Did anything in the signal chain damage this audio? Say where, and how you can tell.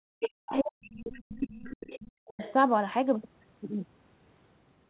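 Yes. Speech suppressed in double talk appears at the call-processing stage, from 0.00 to 1.89 s (around 1.5 s of it affected) and again at 2.32 to 2.42 s. The talker sinks by up to roughly 40 dB while the far side speaks, likely because the echo canceller ducked both signals. Unlike packet loss, the dips follow the other talker.

The other side's voice leaking through is also at the call-processing stage. A second voice appears at 0.21 to 0.30 s (about 5 dB below the talker), 0.57 to 0.61 s (about 20 dB), 0.84 to 0.94 s (about 30 dB) and 1.5 to 2.53 s (about 20 dB). It is likely residual loudspeaker echo the canceller missed, not reverberation, because it is a separate voice rather than a tail of the talker.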